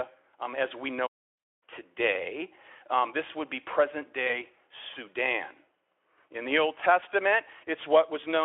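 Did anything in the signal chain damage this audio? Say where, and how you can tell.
Yes, in the network: VoIP packet loss concealed by the speech codec at 1.37–1.43 s and 4.27–4.39 s. Each gap smears into a buzzy tone or coloured noise that fades, not a hard dropout, as the decoder extrapolates its last frame.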